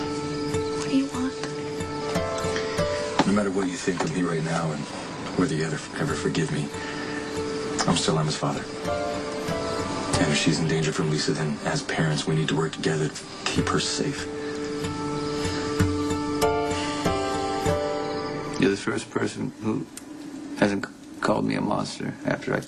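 Around 2.01 to 2.03 s a stretch of about 0.7 s was dropped while later audio waited, a skip ahead: playback jumps forward, the two sides joined with no gap.

From 3.35 to 4.22 s, 4.68 to 5.90 s and 8.19 to 8.80 s the jitter buffer held too much audio and trimmed pitch periods to catch up. This jitter buffer speed-up removes about 50, 100 and 40 ms, running the sound hurried at 105%, 108% and 106% speed without changing pitch.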